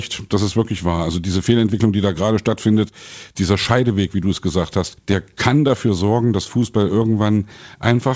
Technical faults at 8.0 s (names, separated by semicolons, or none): jitter buffer slow-down